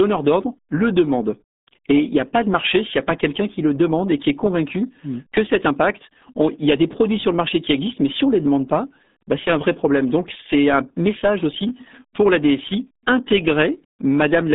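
Speech, and the whole thing has been through what sounds like the RealAudio 14.4 codec, the old dial-up RealAudio 1 format. The band runs roughly from 150 Hz to 3.7 kHz with nothing at all above 3.8 kHz, so it's boxed in like a phone line. On top of that the coding damage is heavy, giving that muffled, gargly smear, which fits an 8 kbit/s speech coder squeezing everything into a tiny bit budget.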